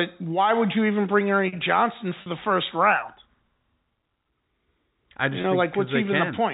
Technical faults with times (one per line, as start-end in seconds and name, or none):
2.22-2.26 packet loss with pitch repetition
5.42-5.44 packet loss with pitch repetition